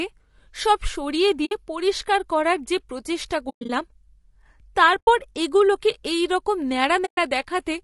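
The speech was likely carried by low-delay AAC compression (AAC-ELD) at a low bitrate, around 32 kbps. Its short frames resolve pitch harmonics poorly, so the speech sounds plainly rough and grainy throughout, with noise filling the gaps between harmonics.

AAC frame loss with muting occurs four times. Each time the decoder zeroes the missing spectrum, leaving a soft-edged hole. The holes fall at 1.45 to 1.52 s, at 3.49 to 3.70 s (several short gaps, the longest around a tenth of a second), at 4.99 to 5.08 s, and at 7.05 to 7.18 s. The gap lengths fit lost 20 ms frames.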